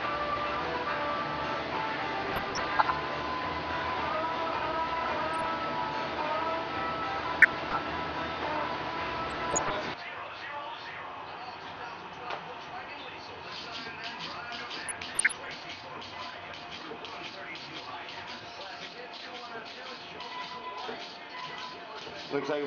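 DAB burbling at 2.25–2.91, 5.27–5.51, 7.42–7.78, 9.30–9.87, 12.72–12.93 and 14.76–15.74 s: under one percent of bits arrive corrupted, so short blips of noise hit single sub-bands.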